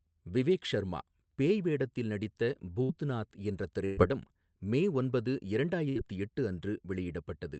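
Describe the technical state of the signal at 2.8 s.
A burst of packet loss runs from 2.83 to 2.92 s. The receiver bridged about 56 ms by stretching the last sound and fading it down, then resumed with 60 ms of speech skipped. Unlike a plain dropout to silence, the gap is filled and the timing jumps forward.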